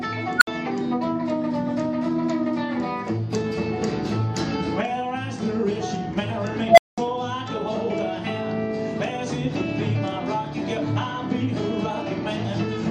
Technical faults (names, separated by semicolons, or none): unstable filter